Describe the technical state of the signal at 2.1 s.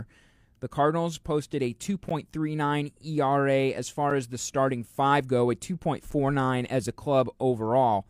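At 2.1 s, just after "posted a", the speech breaks for about 13 ms. This is a gap between stream segments. The time stamps of two adjoining segments fail to meet, and the player fills the missing span with silence. The boundary falls where 2-second segments would join. The hole has hard edges, so it sounds like a brief, clean dropout rather than a fade. Nothing is missing from the speech. It is only pushed later by that small silence.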